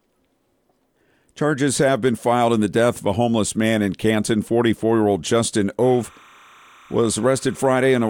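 From 5.82 s to the end at 8.09 s, timecode bleed sits behind the sound: a faint chirping warble roughly 30 dB below it. Linear timecode from a neighbouring track or cable is leaking in. Its square wave flips between pitches near 1 and 2 kHz, with a rhythm that fits 30-frame-per-second code. Unlike a steady whistle or a hum, it never holds one pitch but keeps toggling between two, which gives it a busy, data-like texture.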